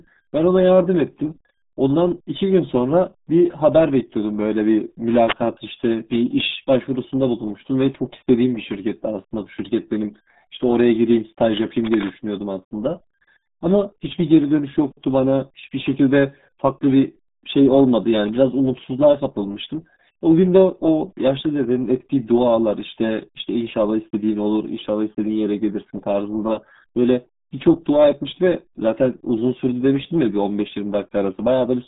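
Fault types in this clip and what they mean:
RealAudio 14.4 codec: Throughout, the speech is confined to roughly 150 Hz to 3.7 kHz with nothing above 3.8 kHz, and heavy gargling and smearing fit an 8 kbit/s dial-up speech coder. This warbling damage separates it from a clean telephone-band filter.
Cable scratch noise: At 5.11 to 5.34 s and 11.82 to 12.15 s, dense, uneven rustling bursts sit nearly as loud as the speech, likely from a worn cable or connector being moved. The short scratchy flurries differ from isolated clicks or steady crackle.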